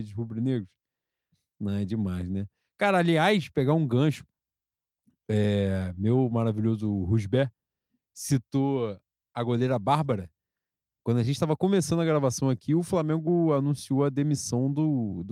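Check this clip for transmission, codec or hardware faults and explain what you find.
Nothing in the speech points to a transmission, codec or hardware fault.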